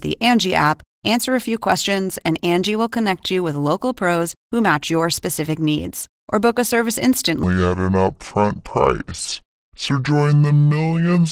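From the start, the speech sounds hoarse and faintly robotic, with a coarse, grainy texture to the voiced sounds. Any background comes out burbling. This is Opus voice compression in its hybrid mode. The lower band is coded by linear prediction with a crudely quantised excitation, and a thin transform layer handles the top of the band, all in 20 ms frames. The amount of plainly audible damage fits a rate around 16 kbps.

From 7.44 s to the end at 11.32 s, the speech suddenly turns deep and sluggish. It drops roughly ten semitones and drags at 0.595 times its proper speed, with pitch and tempo falling together. That coupling points to a section at the wrong speed, likely caused by this stretch being played back or resampled against the wrong clock rather than being deliberately time-stretched.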